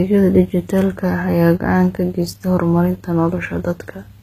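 A speech recording that was likely squeezed through a very low-bitrate codec and then re-encoded as a high-bitrate MP3, a case of low-bitrate audio saved at a high bitrate. The damage persists throughout: nothing remains above 14.9 kHz, and the earlier encoding's artefacts survive intact, pointing to a source around 20 kbit/s.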